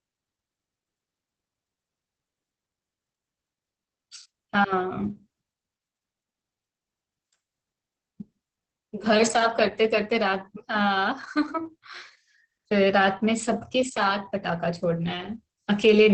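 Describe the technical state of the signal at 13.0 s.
At 13.0 s, as throughout, Opus voice compression leaves speech muffled and hoarse with nothing above 8.5 kHz. The coarse SILK excitation coding, consistent with about 10 kbps, gives a robotic edge, not plain low-pass dullness.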